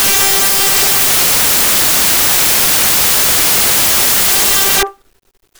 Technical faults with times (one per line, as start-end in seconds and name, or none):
0.00-5.59 samples built from the wrong bytes